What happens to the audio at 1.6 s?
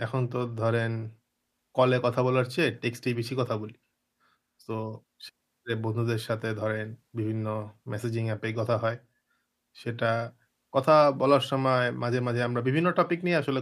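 Nothing goes wrong at 1.6 s; the speech plays through that moment intact, with no dropout, click or distortion to be heard.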